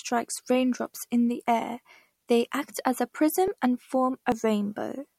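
At 3.48 s and again at 4.32 s the speech jumps forward. About 20 ms vanishes at the first point, about 10 ms at the second. No gap is heard. The likely cause is a dropped buffer (overrun), with the audio on either side joined directly.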